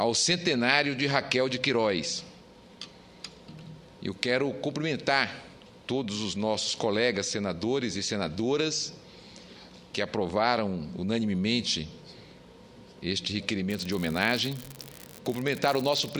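From 13.70 s to the end, an unreliable data bit flips randomly, adding equal spikes of about -21 dBFS: a steady crackling fizz, even through pauses.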